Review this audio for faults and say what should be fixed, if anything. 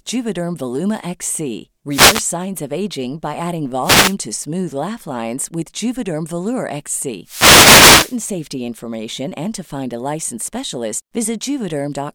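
Wireless microphone noise hits at 1.90–2.25 s, 3.82–4.16 s and 7.23–8.19 s: reflections cancel the FM radio signal, so receiver noise swells into bursts of static. Use diversity receivers with well-placed antennas and a clear line of sight to keep the radio signal strong.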